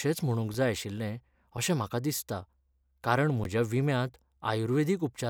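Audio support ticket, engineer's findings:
Underrun with held sample at 0.54 s (just before "जाय आशिल्लें अशें म्हाका"), 1.57 s (between "जाय आशिल्लें" and "अशें म्हाका") and 3.44 s. Output buffer ran dry and the DAC held its last value, losing about 5 ms, 5 ms and about 15 ms of live speech. Waveform: short flat segment. Spectrogram: brief blank column.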